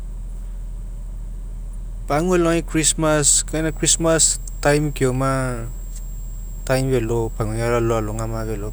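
Switching supply whistle runs from 3.50 s to the end of this speech recording: a thin high tone that wanders between about 7.47 and 7.88 kHz, roughly 25 dB below the speech. A switching power supply running in an audible burst mode, its frequency shifting with load, produces this.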